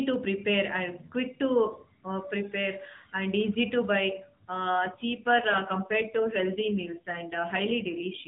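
From the start, the speech comes through an AMR narrowband mobile codec, with nothing above 4 kHz. At 4.70 s an AMR rate drop begins and lasts to the end. The network has pushed the codec to a lower rate and given the spare bits to error protection. The sound fits a fall from 12.2 to about 5.9 kbps. The bandwidth stays the same. There is no gap. The speech turns rougher, buzzier and more synthetic.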